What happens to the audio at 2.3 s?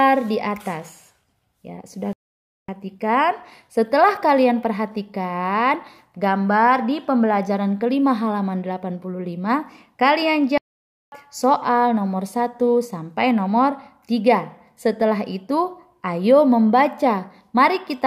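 At 2.3 s the audio has dropped out entirely: the sound halts abruptly mid-flow at 2.13 s and the output stays silent until 2.68 s, a gap of about 0.55 s, before it starts again. This is a playback stall. The likely cause is that the player briefly ran short of data to feed the output, or its playback thread was held up, so nothing reached the output until it recovered.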